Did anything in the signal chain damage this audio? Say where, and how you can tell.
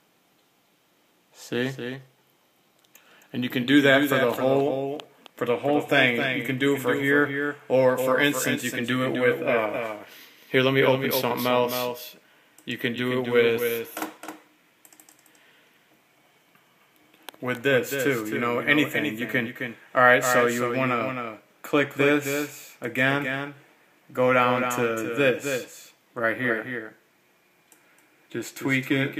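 Yes. A doubled audio track runs throughout: a full-band copy trails by about 300 ms, roughly 5 dB down. Unlike echo, it neither decays nor takes on room colour. Likely a slower second capture path or an edit holding two copies out of step.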